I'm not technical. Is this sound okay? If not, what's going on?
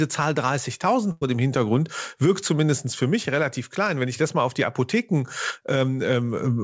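No. There is a burst of packet loss from about 1.12 to 1.23 s. On a call, the sound travels in small pieces, and a few of them never arrived in time. The receiver filled the hole by stretching out the last sound it had and letting it fade, so you hear a brief held buzz or hiss. Then the speech carries on, but about a tenth of a second of it is simply gone.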